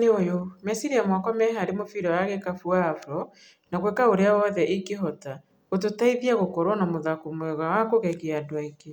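No technical faults can be heard anywhere in it.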